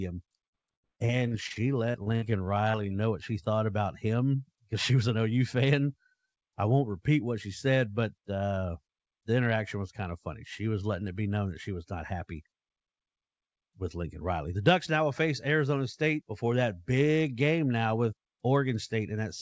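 Speech over a call link whose band stops at 8 kHz, which fits a wideband codec such as G.722 at 64 kbps, with several network faults. From 0.47 to 2.25 s there is repeated packet loss, heard as a robotic sound: twelve holes, the longest 70 ms, are each patched by extending the last sound. About a quarter of that stretch is synthetic, so it sounds choppy. Unlike a single concealed dropout, the gaps keep recurring. Overlapping its end, from 2.13 to 2.97 s, a jitter buffer slow-down stretches the audio to 87% speed, adding 116 ms by repeating pitch periods. Sounds drag while the pitch stays put, which separates it from a tape-style slowdown that would also lower the pitch. Inside that stretch, at 2.71 to 2.77 s, a short concealed packet loss fills a 30 ms hole with continued sound and leaves a brief smear. It is a single isolated event, not part of a chain of gaps. Jitter buffer speed-ups follow at 4.90 to 5.39 s, running at 111% with roughly 70 ms removed, and at 12.13 to 12.58 s, running at 108% with around 40 ms cut. 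Pitch periods are dropped, so the speech sounds hurried without rising in pitch.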